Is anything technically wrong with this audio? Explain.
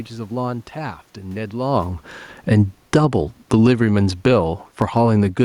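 Yes. From 1.56 s to 5.39 s, automatic gain falling: the gain control judged the input too loud or its background noise too strong and lowered its gain by about 7 dB. The speech and the room noise behind it sink together, so the background drops too, unlike the talker's movement around 1.5 s.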